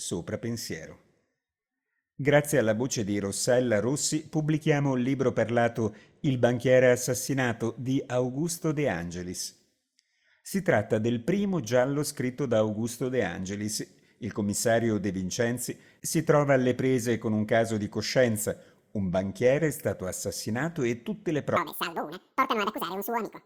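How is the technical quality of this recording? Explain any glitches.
One glitch stands out, at the very end. From 21.56 s to 23.46 s, a section plays at the wrong speed, running at 2.0 times its proper rate. The likely cause is a player or edit set to the wrong clock. Pitch and tempo jump together, roughly ten semitones higher. The sound turns suddenly thin, high and hurried.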